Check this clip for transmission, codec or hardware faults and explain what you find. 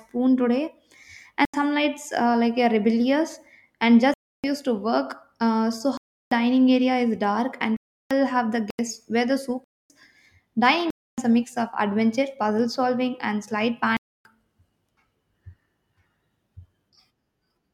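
Block of digital silence, eight times: 1.45 s (just before "some lights uh like"), 4.14 s (after "rebellious and"), 5.97 s, 7.77 s (between "dark and" and "have the"), 8.70 s, 9.64 s, 10.90 s and 13.97 s. Each time the speech is replaced by zeros and then resumes with no fade. The two 85 ms holes, at 1.45 s and 8.70 s, are short dropouts. The others last 256 to 341 ms and are heard as holes in the speech. The 85 ms and 341 ms gaps match whole blocks of 4096 and 16384 samples at 48 kHz, which points to output buffers that were not filled in time.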